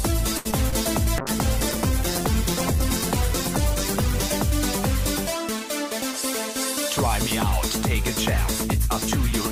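The audio opens with a short stall from a late packet at 0.37 to 0.47 s. A packet arrived late, so the jitter buffer emptied and the receiver stretched the last sound for about 76 ms before resuming where it left off. Nothing is lost, but the held sound carries a slight buzz or dip, and playback runs about 76 ms later from then on. Short concealed packet loss follows at 0.51 to 0.54 s and 0.70 to 0.74 s. Each time about 20 ms of audio never reached the decoder, and the receiver extrapolated from the preceding sound before blending back into the real audio, leaving a brief smear or wobble. From 1.20 to 4.42 s a call bitrate drop makes the sound rough and muffled. The encoder's budget appears to fall from around 96 kbps to roughly 11 kbps, which means coarse coding and a cut high band, and it sits at that floor for about 3.1 s before quality returns.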